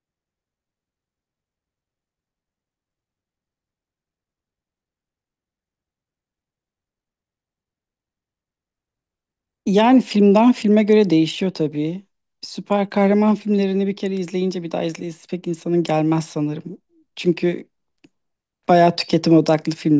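Listening to this speech recording, nothing technical stood out.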